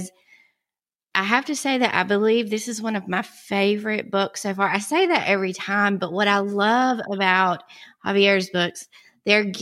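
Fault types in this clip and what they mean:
No fault types can be heard in this clip.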